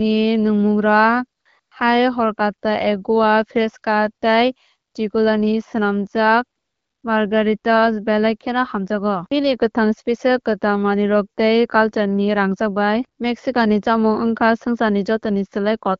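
At 1.41 to 1.45 s, 1.59 to 1.71 s, 4.91 to 4.93 s and 6.59 to 7.03 s, AMR comfort noise replaces real background: the phone stopped sending speech frames and the receiver substituted smooth, steady synthetic hiss that switches in and out. Unlike a dropout, these gaps aren't silent.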